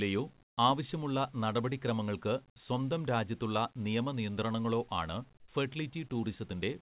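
From 0.44 to 0.56 s the sender likely stopped transmitting during a pause and the receiver substituted comfort noise in place of the background. For 120 ms the real room sound, about 40 dB below the loudest speech, becomes a flat, featureless hiss about 23 dB quieter, a sudden hollow gap.

From 5.4 to 5.48 s the same substitution likely happens for 80 ms. The synthetic noise sits only about 3 dB below a background already about 46 dB down, so the drop in level is small.

From 5.45 to 5.48 s the onset is clipped by the voice detector: the detector was likely slow to register that speech had resumed, so those 30 ms were never sent and comfort noise filled them. The next sound begins abruptly, missing its soft attack. Across the clip the call path's narrowband coding leaves nothing above 4 kHz, which fits G.711 mu-law.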